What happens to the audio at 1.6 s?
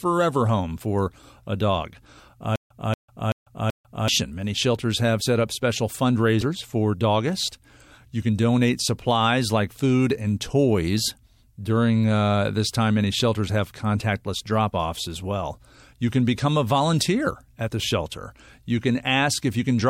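At 1.6 s the speech plays through intact, with no dropout, click, distortion or other disturbance.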